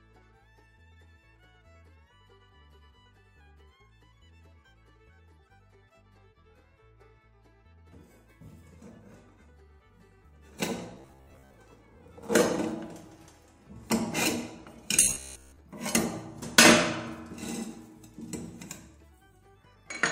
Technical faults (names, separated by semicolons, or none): robotic sound from repeated short buffers